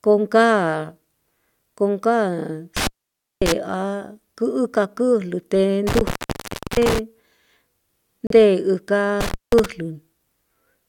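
At 2.77 to 3.52 s and again at 5.87 to 6.99 s the speech drops out for about 0.55 s and 0.67 s, crackling at each edge with faint hiss underneath. This is an intermittent contact: a loose plug or cable briefly opening the signal path.

At 8.27 s the audio falls to silence for 35 ms, then resumes. This is likely a Bluetooth stall, where interference delayed packets until the headphones' buffer emptied and playback paused for the resends.

At 9.21 to 9.66 s the intermittent contact returns, with a shorter open of about 0.19 s bracketed by the same crackle.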